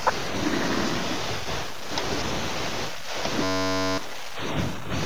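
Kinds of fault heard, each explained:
System hang loop: the driver froze while the hardware kept replaying one 10.67 ms buffer, likely 512 samples, giving a 93.8 Hz buzz over roughly half a second of lost speech.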